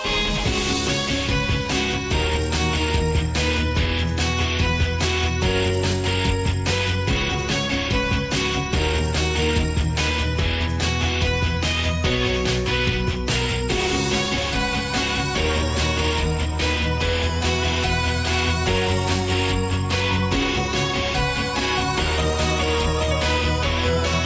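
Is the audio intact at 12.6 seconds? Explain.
Yes, the audio at 12.6 seconds is intact, with no dropout, click, distortion or other fault at that moment.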